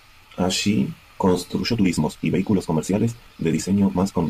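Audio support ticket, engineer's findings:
Time-stretched section, 1.58 s to end of clip: speech abruptly rushes, pitch unchanged. Roughly 1.81x faster. Likely cause: time-scale software squeezing audio to fit a length, dropping short segments to preserve pitch.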